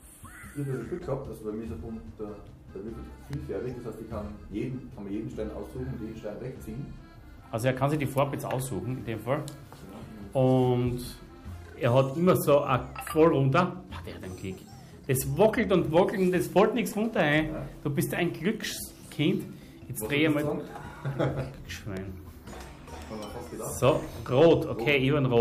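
At 3.33 s and again at 21.97 s there is a single sharp snap, an electrical switching spike, likely from a nearby switch or motor arcing and being picked up on the audio line. Each is over in a couple of milliseconds and peaks moderately, around -25 dBFS. What separates it from a dropout click is that nothing is lost: the snap sits on top of the sound, which continues unbroken beneath it, and the two events are isolated rather than recurring at a regular interval.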